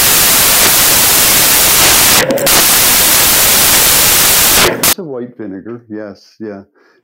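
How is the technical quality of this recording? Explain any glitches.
Poor. From 0.0 to 4.93 s, samples built from the wrong bytes turn the speech into loud white noise: misassembled bytes promote the jittery low bits, filling the waveform and smearing the spectrogram flat until "a white vinegar".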